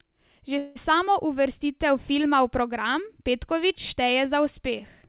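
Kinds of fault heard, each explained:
Call audio freeze: From 0.58 to 0.77 s the speech stalls, and the last sound is stretched into a short fading buzz or hiss for about 173 ms without dropping to silence. Speech then picks up with "samo uvrstitev filma v", nothing lost, only pushed later by that same 173 ms. This is likely packets delayed in transit draining the jitter buffer, with the receiver filling the wait, all within the call's narrowband sound that stops at 4 kHz.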